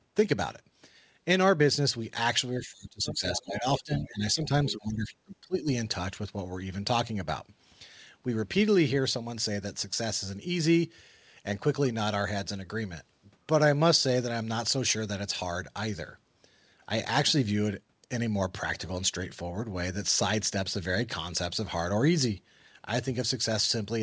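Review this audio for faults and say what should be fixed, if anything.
Speech suppressed in double talk: between 2.54 and 5.69 s, both ends were talking at once, and the echo canceller likely could not tell the local talker apart from the loudspeaker echo, so it clamped down on everything. The result is speech that sinks and breaks up for roughly three seconds in total, dropping by as much as about 25 dB at its lowest, with the talker fading in and out rather than staying steady.

Other side's voice leaking through: during that same stretch, the canceller likely failed to strip all of the far-end playback from the microphone signal. The remote voice comes through in two brief fragments, at 3.06 to 3.42 s and again at 4.69 to 4.73 s, sitting about 15 dB below the talker. Because these fragments are short, they come across as scraps of a second voice under the main one, which clutters an already damaged passage. 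The band limit at 8 kHz fits a wideband call codec such as G.722 and is not part of either problem.

Using a headset, or an echo canceller with better double-talk detection and a well-converged echo path model, would prevent both faults.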